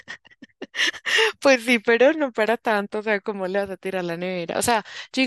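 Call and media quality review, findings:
No call or media quality findings for this speech clip.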